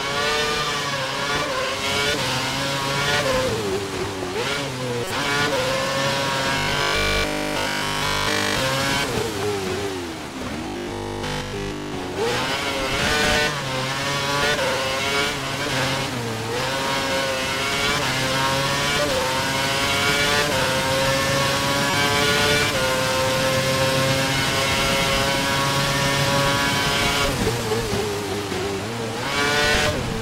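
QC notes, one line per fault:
5.04–5.11 s and 21.9 s, corrupt frame decoded: a short squeak-like blip peaking around -10 dBFS, around two frames long at 5.04 s and one at 21.9 s. Damaged compressed frames were still decoded, so energy landed at wrong frequencies for each frame.
6.58–8.60 s and 10.67–11.93 s, robotic sound from repeated short buffers: a rigid metallic buzz at 50 Hz replaces the sound. The likely cause is the playback looping a 20 ms buffer, with nearly all new audio skipped in those stretches.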